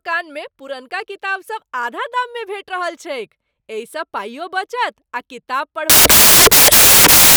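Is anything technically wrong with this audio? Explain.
Yes. From 5.90 s to the end at 7.36 s, samples are built from the wrong bytes, so jumbled low bits dominate and the speech turns into loud, harsh broadband noise.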